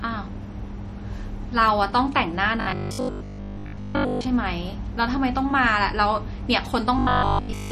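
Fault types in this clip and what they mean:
MP3 compression: The speech has a plainly audible watery, swirly quality, which points to MP3 encoding at a low rate, likely around 48 kbps. Short of bits, the encoder zeroes weak frequency lines, and these flicker on and off between frames.
Robotic sound from repeated short buffers: From 2.61 to 4.27 s and again from 6.99 to 7.71 s, the speech becomes a rigid, metallic 50 Hz buzz. The likely cause is a 20 ms stretch being replayed while real audio is skipped, covering most of the first span and all of the second.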